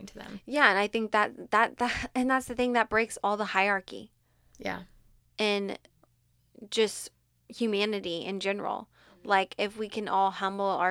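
No technical faults are audible.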